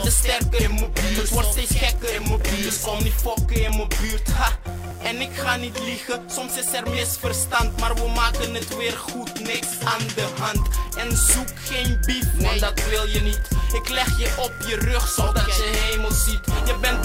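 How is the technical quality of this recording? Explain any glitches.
Two quick glitches, at 3.69 s and 4.91 s, each with the sound jumping forward, with no gap of silence. That's most likely a dropped buffer (overrun): the recording software didn't pick up its samples before the hardware wrote over them, so a short slice, something like 15 ms, vanished and the audio on either side got butted together. That abrupt splice is the jump you hear.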